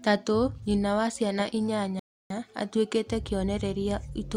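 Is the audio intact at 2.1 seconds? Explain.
No. At 2.1 seconds the clip is inside a rebuffering stall that runs from 1.99 to 2.30 s, right after "nyina wa ciana". The player exhausted its downloaded audio and halted playback until more data arrived, so the speech drops to silence for roughly 0.31 s. When it resumes, it picks up exactly where it stopped. No speech is lost, but the gap adds that 309 ms of dead time to the clip.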